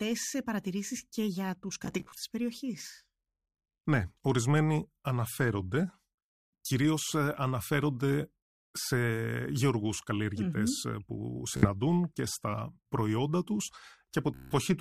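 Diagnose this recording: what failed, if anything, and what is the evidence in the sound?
Bluetooth stutter on the wireless link. At 1.85–2.17 s, 11.57–11.68 s and 14.34–14.54 s, lost packets make short slices repeat as a buzz. The speech then skips ahead.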